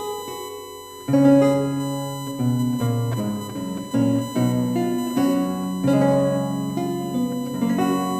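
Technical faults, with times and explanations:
Throughout: USB whine, a steady fixed-pitch tone at 1 kHz sitting roughly 15 dB under the sound. Current drawn in the USB bus's 1 ms frames leaks into the audio through shared power or ground, so the whine repeats at that 1 kHz frame rate.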